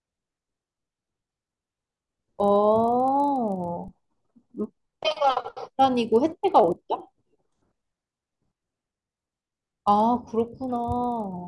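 A faint, steady 25 Hz buzz runs under the speech throughout, present only while there is signal. This is the resampler restarted on every block: each 40 ms block was converted alone, consistent with a 48 kHz to 24 kHz conversion, leaving an error at every block edge.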